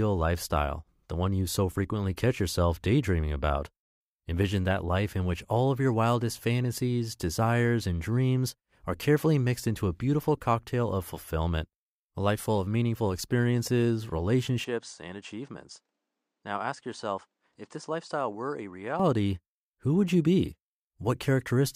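Input switched to a poorer device, from 14.64 s to 19.0 s: the speech abruptly loses its top end, with nothing above 9.4 kHz, and drops about 10 dB in level, arriving with a faint new noise floor well below the voice. The change happens with no gap, so the sound simply turns duller and quieter mid-flow. The cause is likely the recording input jumping to a narrower-band microphone or headset profile before switching back near 19 s.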